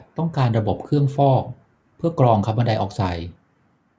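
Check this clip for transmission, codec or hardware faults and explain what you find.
No transmission, codec or hardware faults turn up when checking this clip.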